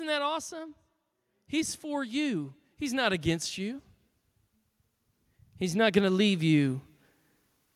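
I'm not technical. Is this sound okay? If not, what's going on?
No, not quite. There are two spots where automatic gain rising happens: from about 1.5 to 3.86 seconds, and again from about 5.59 to 6.84 seconds. The recording system decided the input was too quiet and turned its own volume up gradually. You hear the speech and the background noise behind it swell together over a second or two. The first rise is the larger of the two.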